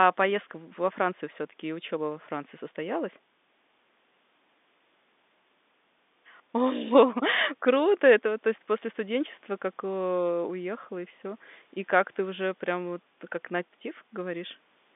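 No technical faults can be heard anywhere in this speech clip. The G.711 telephone coding confines the sound to a line band of roughly 200 Hz to 3.6 kHz, the narrow, boxy character of a 64 kbps mu-law phone channel, with any coding noise faint at most.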